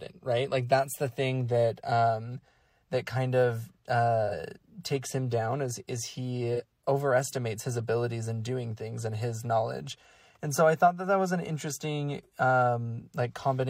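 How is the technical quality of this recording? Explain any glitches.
Two brief dropouts mar this speech. AAC frame loss with concealment hits at 4.27–4.34 s and 6.54–6.61 s: about 43 ms gone each time, fitting a single frame, patched from the prior spectrum, giving a short smeared, phasey blip.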